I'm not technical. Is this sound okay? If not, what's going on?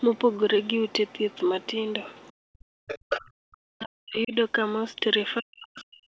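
No. Two problems can be heard, and both point the same way.

Other side's voice leaking through: a second, faint voice sits under the main talker at 0.0 to 0.36 s, 0.88 to 1.38 s, 1.61 to 1.74 s and 2.08 to 2.3 s. From 2.87 to 3.31 s it comes back nearly as loud as the talker. This is most likely the far end of the call playing on the talker's loudspeaker and being picked up again by their microphone, where the echo cancelling didn't fully remove it.

Speech suppressed in double talk: from 2.29 to 4.33 s, and again from 5.4 to 6.07 s, the main talker's voice sinks, at its worst almost to silence. This adds up to roughly one and a half seconds in the first stretch and under a second in the second. The first stretch overlaps the loud leak at 2.87 s. When both sides speak at once, the echo cancelling likely cannot tell the talker from the echo and turns the sound down to get rid of the echo.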